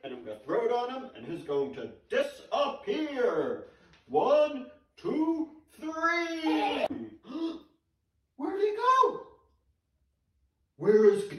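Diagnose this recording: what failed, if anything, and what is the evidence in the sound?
The sound carries slight, unevenly spaced hiccups and a faintly unsteady tempo from start to finish, never settling. This is clock drift between sender and receiver, a network-stage timing fault: the sender's sample clock runs roughly two percent slow against the receiver's. The receiving jitter buffer therefore keeps draining faster than it is refilled, so the receiver must keep stepping in to hold its level rather than letting it run dry.

Those interventions are repeated timing corrections, audible from 0.22 s to 11.26 s as small stumbles where brief stretches seem to stall or double back, at irregular spacing but always the same kind of edit. Playback runs at about 98 percent speed across that span, and the corrections pad the timeline by around a fifth of a second in total. The receiver repeats short pieces of audio to fill the shortfall left by the slow sender.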